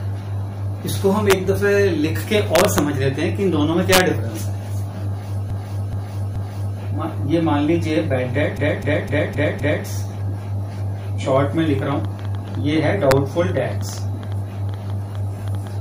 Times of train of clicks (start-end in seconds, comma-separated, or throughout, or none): 11.36-15.68